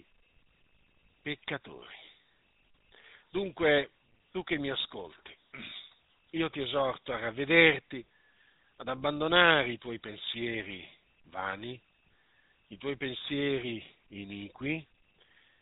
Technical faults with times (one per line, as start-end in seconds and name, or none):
0.00-15.61 GSM full-rate codec